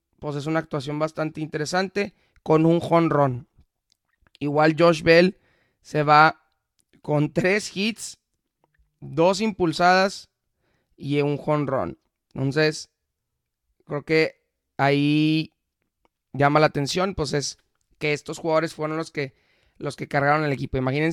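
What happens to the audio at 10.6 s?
Nothing goes wrong at 10.6 s: the audio carries straight through that moment with no dropout, click, glitch or other fault.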